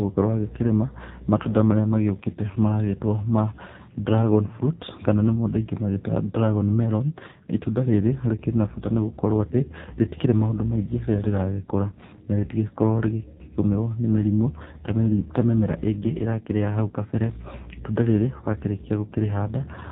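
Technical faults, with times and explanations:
Throughout, AMR narrowband mobile codec: nothing above 4 kHz passes, and the heavy buzzy, synthetic speech fits a very low bitrate near 5.9 kbps.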